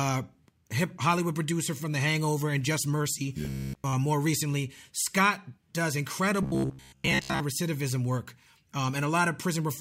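From 3.45 to 3.93 s, just before "more recently", the speech collapses into robotic sound, likely from repeated short buffers. Audio isn't arriving fast enough, so a slice of roughly 15 ms gets looped in place of most of the real signal. That loop stamps a fixed buzz at about 66.8 Hz over everything, leaving a metallic drone that only loosely tracks the speech. The same buzz returns from 6.43 to 7.40 s.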